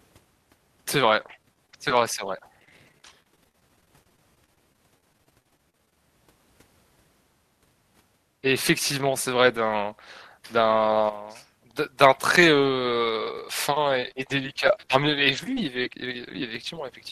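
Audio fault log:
1.19–5.97 s, repeated packet loss (robotic sound): Dozens of holes arrive in quick succession, the longest 38 ms. Each is patched by stretching the last sound, about 771 ms in all. The fills keep repeating, so the speech turns choppy and robotic.
13.95–16.95 s, scattered short gaps: Around fifteen brief holes appear, spread out, the longest about 20 ms. Each is bridged by continuing the preceding sound, roughly 200 ms in total. The speech stays clear but picks up small ticks and hiccups.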